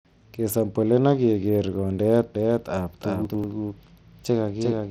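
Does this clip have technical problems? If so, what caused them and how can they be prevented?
Yes. Throughout the speech the treble flickers and drops out, with a gritty, aliased haze on every sound, which points to heavy Bluetooth SBC compression at a low bit pool, roughly in the region of 80 kbps. The likely cause is the SBC link starving its upper sub-bands of bits. Using a higher bit pool or a better codec such as AAC or aptX would prevent it.

From 2.35 s to the end, an echo-like duplicate follows each sound about 0.4 s behind at about 5 dB lower. It has no room colour and starts abruptly, so this is a doubled audio track, likely from the signal also being captured through a second, slower path. Making sure only one capture route feeds the recording prevents it.

Between 3.25 s and 3.44 s there is a brief jumbled stretch where a chunk of about 93 ms plays one slot late, so the chunks are out of order. 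Nothing is lost, but there are three hard joins. Buffering with sequence checks before writing prevents it.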